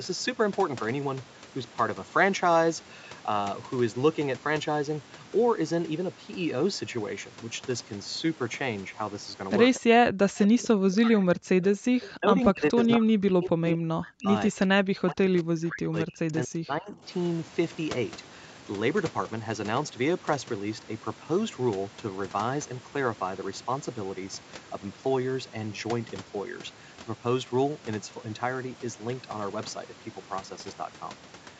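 A speech recording from a call has echo-canceller faults clustered between roughly 9.7 and 17 s. Echo leak appears as three brief delayed copies of the far-end voice at 9.74–9.80 s, 10.46–10.67 s and 12.02–12.11 s, each trailing its source by 232 ms and sitting about 20 dB below the main speech. The consistent delay and low level are what you get when a loudspeaker-playing endpoint's canceller fails to fully subtract the acoustic path, so this is likely residual echo returned to the line. Background gated by the echo canceller follows at 9.82–9.86 s, where the room tone drops by about 40 dB for some 40 ms and then recovers. That short hole is the canceller's suppressor clamping the microphone while far-end audio played, then releasing. Speech suppressed in double talk is the longest problem, covering 10.15–14.3 s and 14.5–17.05 s. Across these spans the near talker is turned down, with the deepest cuts reaching roughly 40 dB and around 3 s and 2 s of the two spans audibly affected. 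Both sides were talking at once, and the canceller, likely unable to tell the local voice from the loudspeaker echo, attenuated everything. The same stretch carries the second and third echo fragments, showing the suppression and the residual echo overlapping. Separately, the band ends at 8 kHz, consistent with normal call microphone processing.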